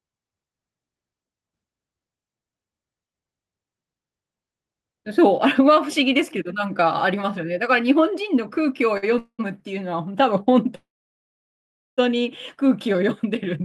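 At 8.97 s the speech hangs for about 51 ms in a short stall from a late packet. The jitter buffer ran dry when a packet was due, so the receiver stretched the last sound until the packet turned up and then carried on from the same point. The result is a briefly held syllable with a faint buzz or dip, and nothing is lost. The whole delivery shifts about 51 ms later.

Two call audio freezes follow, each likely caused by packets held up in transit that left the jitter buffer empty. From 9.18 to 9.48 s roughly 200 ms is filled in. The concealment tail decays and the final 80 ms or so is silent before the speech resumes where it stopped. From 10.75 to 12.00 s the gap is about 1.2 s, and about 1.13 s of that is dead silence after a brief fading continuation. Again the speech picks up without loss, only later. All of this sits on a band-limited call path whose top end stops near 12 kHz, as Opus at a moderate bitrate would give.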